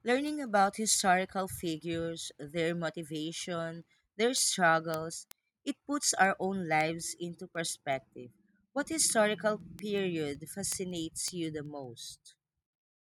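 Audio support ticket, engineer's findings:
Word clock ticks, 0.28 to 13.15 s: steady single-sample ticks about five per second, roughly 70 total. Receiver clock unlocked from sender, slipping one sample each time. Steady spacing separates this from random clicks.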